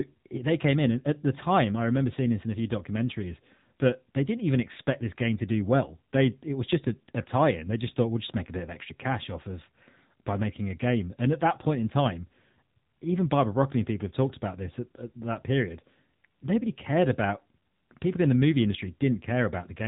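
Throughout, AMR narrowband mobile codec damage: the spectrogram stops at 3.8 kHz, and the pulse-driven vocal-tract model makes speech plainly buzzy, fitting roughly 8 kbps.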